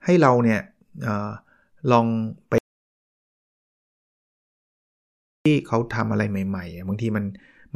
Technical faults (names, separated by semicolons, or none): audio dropout to silence